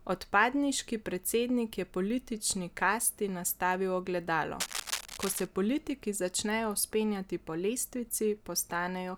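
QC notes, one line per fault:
4.60–5.47 s, cable scratch noise: for just under a second of the speech, right after "politični kasti nastavil ogledalo" and ending before "politiki začnejo vzpenjati po", a dense, ragged crackle rides over the signal at roughly 5 dB below it, heard as scratching or rustling. The likely cause is a worn cable or connector being moved, its contact resistance fluttering. Unlike a single click or a steady hum, the bursts are irregular and clustered, starting and stopping with the handling.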